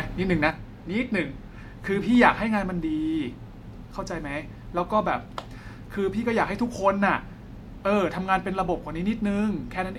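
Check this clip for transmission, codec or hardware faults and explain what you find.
One fault is present. From 0.50 s to the end of the clip, one channel drops out, likely a stereo channel lost before the mono sum. The speech abruptly falls by about 6 dB and stays quieter, and anything carried only in the missing channel disappears.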